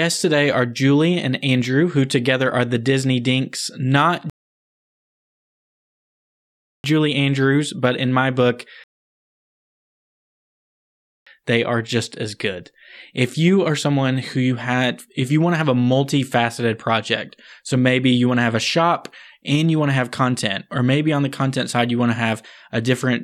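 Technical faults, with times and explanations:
4.30–6.84 s and 8.84–11.27 s, rebuffering stall: the speech halts into silence for about 2.5 s, then 2.4 s, as playback runs dry waiting for data, then resumes exactly where it stopped. Unlike a dropout, nothing is skipped; the pause only adds time.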